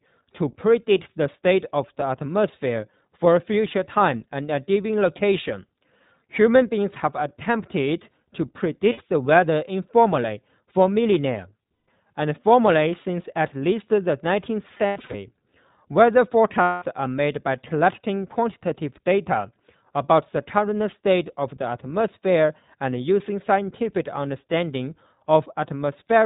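Throughout, the speech carries the band-limited, slightly synthetic roughness of the iLBC codec, with nothing above 4 kHz, which fits 20 ms frames at about 15 kbps. Lost iLBC frames at 8.92, 11.85, 14.74 to 15.15 (scattered, longest run near 100 ms) and 16.62 s become held buzzy vowels, not silent dropouts, with instant recovery.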